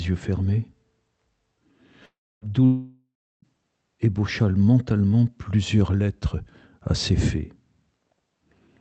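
At 2.05 s the sound breaks into a buzzy continuation that fades to near silence and resumes at 2.44 s, skipping about 0.36 s. A second, longer gap runs from 2.65 to 3.45 s, losing about 0.78 s before the audio returns. Both are likely a long network dropout. Unlike a brief concealed packet loss, which only smears a few milliseconds, each gap decays into silence and then jumps ahead, leaving the lost material unplayed.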